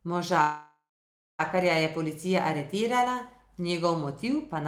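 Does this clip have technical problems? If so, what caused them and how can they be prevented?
Yes. A call audio freeze runs from 0.41 to 1.41 s. The last sound is drawn out into a fading buzz, then 580 ms of silence. The speech resumes exactly where it stopped, about 1 s late, with nothing lost. Delayed packets likely drained the jitter buffer. A more stable network path or a larger adaptive jitter buffer would prevent this.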